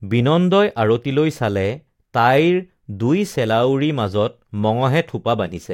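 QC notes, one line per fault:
No fault stood out on listening.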